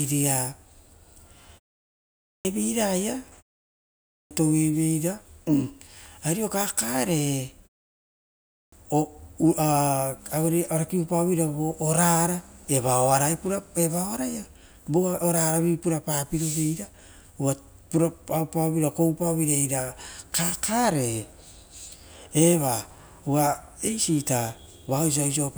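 The output device drops into a sleep state during short silences and is slow to wake, producing a clipped start after a pause at 1.84 s, 3.76 s and 8.15 s. Speech resumes abruptly after each gap, with its first 0.55 to 0.61 s swallowed.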